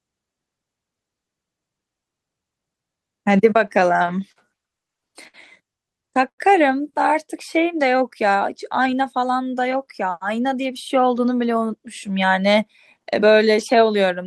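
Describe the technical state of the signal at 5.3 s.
At 5.3 s you're inside a stutter, repeated stalls from 4.84 to 5.36 s: late packets emptied the jitter buffer four times, so the last sound gets stretched and the speech drags.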